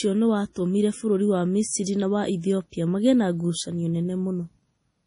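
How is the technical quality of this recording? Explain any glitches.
Quality is poor, with heavy codec damage throughout. The speech stops dead at 10.6 kHz and sounds watery. This is likely MP3 compression near 32 kbps, starving treble and weak frequency lines.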